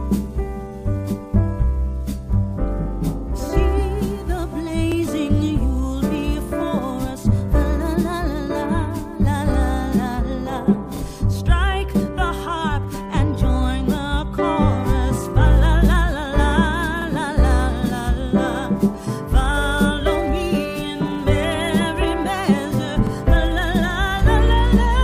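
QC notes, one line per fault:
4.92–4.97 s, 17.02–17.07 s, 23.07–23.12 s, overlapping chunks: a brief stutter or click at each point, where a 50 ms slice of sound plays twice. Each new 6-second chunk begins 50 ms before the previous one ended, so that overlap repeats at the join.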